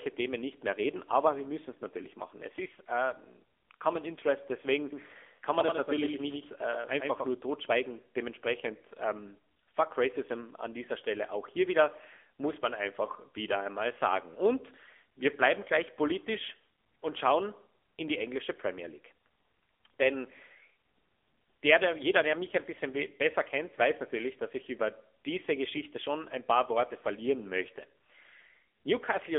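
From start to finish the speech carries AMR narrowband mobile codec damage, plainly audible. Content is confined to a telephone band of roughly 300 Hz to 3.5 kHz, with nothing above 3.7 kHz, so sibilants lose their edge and the sound is thin. The codec rebuilds each frame from a vocal-tract model excited by sparse pulses. The resulting buzzy, synthetic texture fits a low AMR-NB mode near 7.95 kbps.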